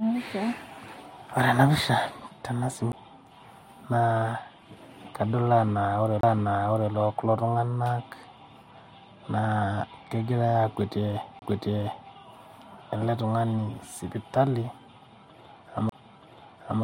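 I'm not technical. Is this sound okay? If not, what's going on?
No. The speech has four CD skips, at 2.92 s, 6.21 to 6.23 s, 11.39 to 11.42 s and 15.89 to 15.92 s. Each time, the player's laser jumped onto a different turn of the disc's spiral track. The sound cuts out very briefly, for about a hundredth of a second at the first skip and a few hundredths at the others. It then resumes from a slightly different point, so a bit of speech is lost or repeated.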